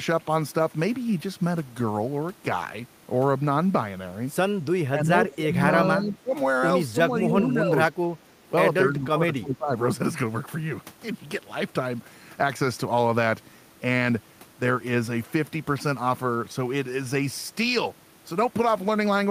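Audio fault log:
4.92–5.6 s, 5.87–6.34 s, 6.92–7.76 s, 8.24–8.29 s and 8.87–9.72 s, speech suppressed in double talk: the voice keeps sinking, by about 10 to 20 dB at worst, deepest near 9 s. Likely the echo canceller mistook it for loudspeaker echo while both ends talked and ducked it.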